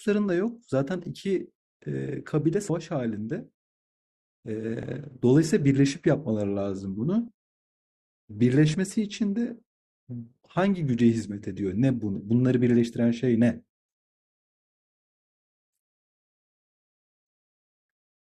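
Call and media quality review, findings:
Compressed frames skipped at 2.69, 4.83, 7.27 and 8.74 s. Speech jumps forward with no silence: roughly 70 ms lost at 2.69 s, around 50 ms at 4.83 and 7.27 s, around 20 ms at 8.74 s. Fits whole 24 ms frames missing or rejected at the decoder. Each join is a jump ahead in the speech, not the silent hole of a dropout.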